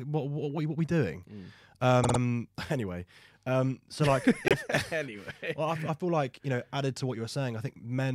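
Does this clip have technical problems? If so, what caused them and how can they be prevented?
Yes. Repeated frames occur at 2.03 to 2.18 s, where a 52.2 ms block of the speech plays three extra times, a stutter that adds 156.7 ms and fits a pair of compressed frames of about 26 ms each. At 4.48 to 4.54 s, just after "anyway um so like", a 26.1 ms block, likely a single frame, plays once more and adds 26.1 ms. The decoder replays frames that were written or sent more than once. To prevent it, check sequence numbers or timestamps when writing or receiving the stream, and drop any duplicate frames before decoding.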